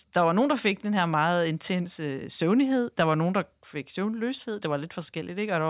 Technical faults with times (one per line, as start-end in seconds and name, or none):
none